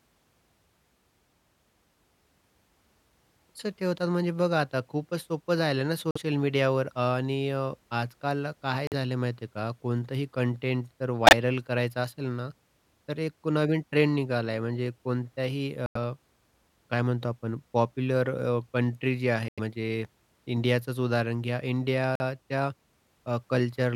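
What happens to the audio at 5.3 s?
Nothing goes wrong at 5.3 s; the speech carries on intact through that moment with no audible dropout, click, distortion or other fault.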